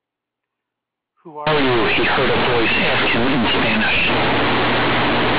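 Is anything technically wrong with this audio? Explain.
Yes. Companded audio read as linear runs from 1.47 s to the end. The A-law bytes of this telephone-coded speech are played as plain linear 8-bit samples, with the expansion step skipped. The logarithmic codes are taken at face value, so every change of sign flings the output across about half its range, and quiet stretches come out as large as loud ones. The result is harsh, very loud, buzzy distortion, with pauses filled by strong noise.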